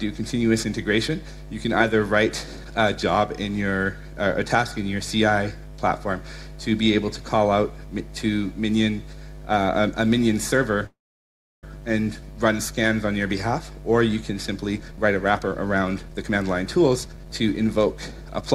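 From 10.86 to 11.64 s the last sound is stretched into a short fading buzz and then drops to silence for about 0.68 s before resuming where it stopped. This is likely a call audio freeze: packets stalled, the jitter buffer ran dry, and the receiver filled 765 ms, losing nothing but adding that much delay.

From 14.73 to 18.42 s the audio sounds hurried, running at about 119% speed with its pitch unchanged. This is a jitter buffer speed-up: with a surplus of buffered audio, the receiver kept cutting short pitch-period slices, trimming roughly 0.7 s to pull the delay back down.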